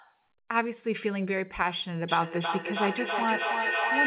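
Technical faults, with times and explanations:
2.09–4.06 s, feedback howl: two devices on the same call are sharing a room, and the microphone-to-loudspeaker loop gains level on each trip. The repeats grow instead of decaying and narrow to a tone around 2 kHz. The repeats come roughly every 300 ms, and the howl peaks at about 2 dB above the speech. On a spectrogram it appears as a bright horizontal band near 2 kHz, well inside the 4 kHz call band. The waveform swells into a dense envelope that runs to the end.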